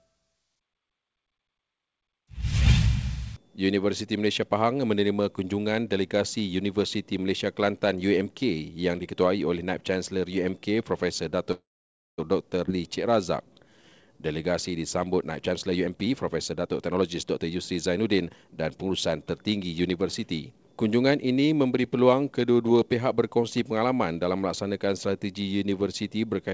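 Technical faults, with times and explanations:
11.52–12.20 s, call audio freeze: Packets were likely held up in transit until the jitter buffer ran dry, so the receiver stretched the last sound into a brief fading fill, then about 560 ms of silence. The audio resumes where it stopped, adding 660 ms of delay.
12.66–12.69 s, skip ahead: A short stretch of audio was discarded while later audio was already queued. Roughly 200 ms is lost, and the two sides are joined by only a 13 ms bridge, so playback jumps abruptly forward.
12.72–14.34 s, jitter buffer slow-down: With its reserve running low, the jitter buffer repeated single pitch periods and bits of pauses many times in a row, adding 185 ms. The audio plays at 89% speed with unchanged pitch, so sounds drag out and can waver slightly.
15.41–18.91 s, jitter buffer speed-up: Holding more audio than its target, the jitter buffer repeatedly removed short pieces one or a few pitch periods long, about 0.7 s in total. 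The audio runs at 119% speed at the same pitch and sounds hurried, while the G.722 path's 8 kHz band limit is unaffected.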